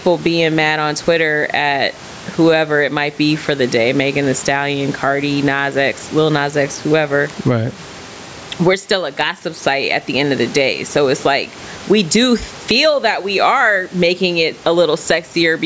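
Gain pumping runs through the whole of this speech clip. The room noise sits about 30 dB below the speech, and the gain swings by around 15 dB. This is likely a microphone gain set far too high, with a fast limiter clamping each peak and squashing loud and soft passages together.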